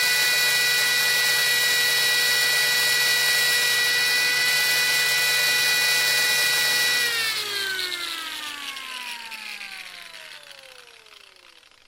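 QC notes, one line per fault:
No faults were found anywhere in the clip. Nothing in the audio calls for a QC line.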